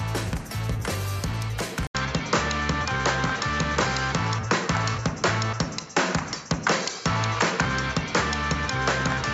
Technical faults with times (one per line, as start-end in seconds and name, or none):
1.87-9.33 input switched to a poorer device